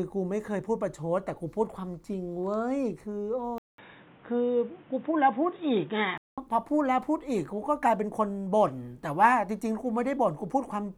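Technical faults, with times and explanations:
3.58–6.38 s, input switched to a poorer device: after a 200 ms gap the speech turns dull and boxy, with nothing above 3.8 kHz and a faint new noise floor about 30 dB below it, at a similar overall level, likely a switch to a lesser microphone or a headset's call profile, before clearing again.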